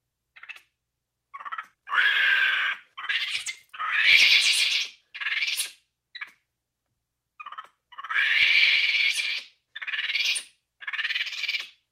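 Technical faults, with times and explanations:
Nothing here needs flagging; the audio holds together without any technical trouble worth pointing out.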